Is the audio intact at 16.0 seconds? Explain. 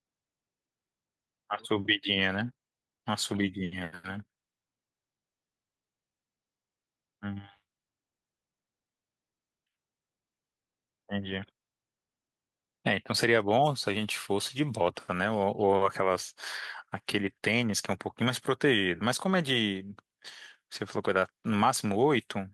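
Yes, at 16.0 seconds the speech plays through cleanly, with no dropout, click, distortion or other technical fault to be heard at that point.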